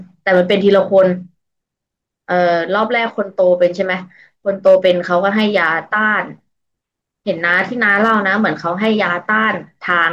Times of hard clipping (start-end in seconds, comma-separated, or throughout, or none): 0.29-1.04, 2.83, 3.62-3.66, 4.67-5.66, 7.51-8.45, 8.84-9.02, 9.44, 9.91-10.05